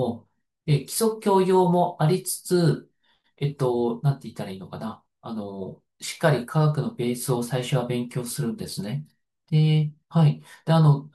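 Speech recording with no audible technical faults anywhere.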